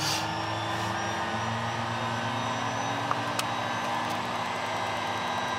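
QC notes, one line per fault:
3.82 to 5.59 s, Wi-Fi interference: from here to the end there's a steady ticking at a bit under ten per second, sitting roughly 25 dB below the audio. That rhythm matches a 102.4 ms beacon period. A nearby Wi-Fi radio is leaking into the audio circuit, and something in the path is rectifying its RF bursts, so each beacon comes out as a click and the traffic in between as rougher rasps.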